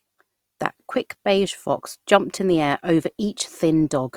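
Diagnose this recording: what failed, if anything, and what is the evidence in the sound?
Codec stage. Low-bitrate coding artefacts persist throughout the speech, though the band reaches 20.2 kHz. This is likely low-bitrate audio saved at a high bitrate as MP3.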